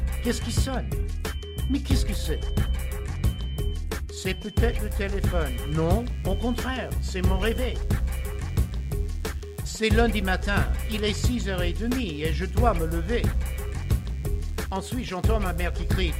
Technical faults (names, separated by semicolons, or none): DECT cordless phone buzz